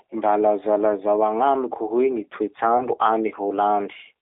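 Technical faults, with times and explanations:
Throughout: G.729 codec. The audio is confined to a telephone band of roughly 300 Hz to 3.6 kHz. Within that band, the speech has the plainly audible roughness and slightly synthetic edge of a codec that rebuilds each 10 ms frame from a vocal tract filter, a pitch predictor and a few sparse pulses, which fits an 8 kbit/s G.729A stream. Unlike a simple band-limited line, the damage is in the texture of the sound itself, not only in the missing highs and lows.
2.78 to 2.87 s: VoIP packet loss concealed by the speech codec. A brief gap, which fits a single lost 20 ms packet, is filled by the decoder repeating its last pitch and filter settings at falling gain. This produces a short stretched, fading sound. Because each new frame builds on the previous one, the weakened, distorted quality carries on past the gap to about 2.87 s. A plain dropout would be silent, and a clean splice would click without this lingering tail.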